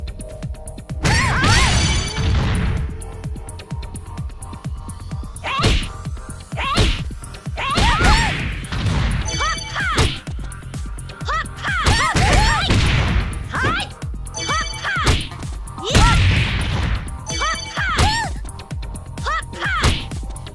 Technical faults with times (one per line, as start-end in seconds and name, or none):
none